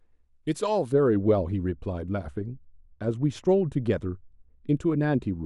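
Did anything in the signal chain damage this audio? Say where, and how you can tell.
Yes. From 0.92 s to the end of the clip, the speech turns dull and muffled. The high end slopes away smoothly, about 11 dB down at 10 kHz relative to 1 kHz, with no hard corner. That shape points to de-emphasis applied wrongly at the processing or playback stage. A treble-cut filter built to reverse pre-emphasis was run on audio that never had that boost, or was run a second time, so it removed genuine high-frequency content.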